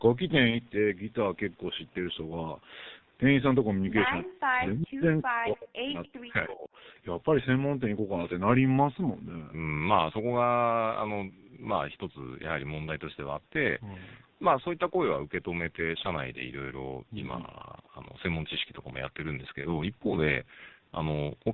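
Throughout, the speech carries heavy G.723.1 codec damage. The tone is muffled and hoarse, consonants smear together, and the voice model lags behind fast changes, which fits a low rate around 6.3 kbit/s. On a spectrogram, energy stops sharply near 4 kHz, leaving the band above it nearly empty. Harmonics look grainy and stepped at roughly 30 ms intervals, matching the codec's frame length.

At 0.50 s, VoIP packet loss concealed by the speech codec produces a brief stretched sound lasting until about 0.57 s. The decoder repeats its last pitch and filter while lowering the gain, and the disturbance fits a single lost 30 ms frame. A spectrogram shows the spectrum frozen flat, and the waveform shows repeated identical pitch cycles shrinking in amplitude before normal detail resumes.

A second concealed loss at 19.61 s runs to about 19.72 s. It again points to one missing 30 ms frame, but the damage lasts longer because each decoded frame builds on the previous one, so the voice stays weak and distorted after packets return. 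On a spectrogram the frozen band fades out gradually, and the waveform envelope dips and recovers slowly.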